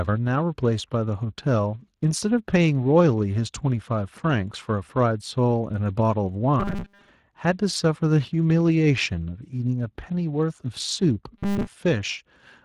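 From the start the speech carries plainly audible Speex codec damage: a hoarse, grainy coarseness where the encoder has too few bits to rebuild the excitation properly, so voiced sounds come out rough and noisy rather than clean. The degree of it fits a bitrate somewhere around 22 kbps, and it stays the same right through to the end.

From 6.60 to 7.09 s the voice collapses into a rigid metallic buzz at about 200 Hz, which is the robotic sound from repeated short buffers. It's likely down to audio arriving too slowly, with the software looping the last chunk of roughly 5 ms to fill the gaps while most of the real audio in that stretch gets skipped. The same 200 Hz buzz comes back from 11.38 to 11.68 s.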